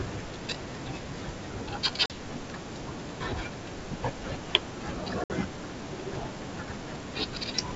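Packet loss on an ADPCM call hits this speech clip twice: about 40 ms of audio, a couple of packets, goes missing at 2.06 to 2.13 s, and about 60 ms, a few packets, at 5.24 to 5.31 s. Each gap is filled with abrupt silence. Because the decoder's adaptive predictor and step size drift out of step with the sender's, the speech returns with brief slight distortion, settling over the following tens of milliseconds. The wideband G.722 sound carries clearly up to about 7 kHz, with only a faint upper-band hiss.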